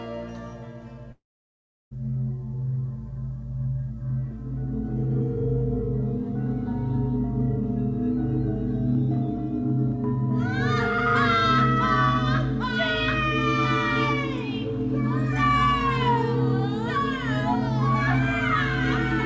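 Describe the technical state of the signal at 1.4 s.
At 1.4 s the sound is gone in a gap from 1.12 to 1.93 s, likely a long network dropout. The concealment buzz or hiss fades within tenths of a second to silence, unlike brief packet-loss glitches.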